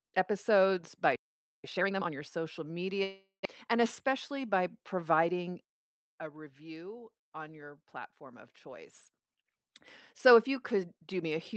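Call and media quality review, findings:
Playback stall, 1.16–1.64 s, right after "episodes by": output stops dead for about 480 ms, then resumes mid-phrase. Likely a player buffer underrun or blocked audio thread. Waveform: flat silent gap; spectrogram: blank vertical band across all frequencies.

Time-compressed catch-up, 1.64–2.1 s, ending just before "your social": playback hurried at 2x with pitch held. Player trimming backlog by cutting and cross-fading short segments. Spectrogram: harmonic spacing unchanged, syllables squeezed horizontally; waveform shows short cross-faded splices.

Long network dropout, 3.03–3.47 s, just after "your social": audio replaced by a decaying buzz that fades into about 0.16 s of silence, then resumes with about 0.4 s of content gone. Likely packet loss, with Opus loss concealment extrapolating. Spectrogram: smeared harmonics fading, below the 8 kHz band edge.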